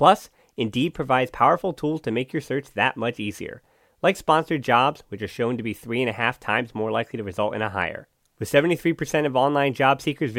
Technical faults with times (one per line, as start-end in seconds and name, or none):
none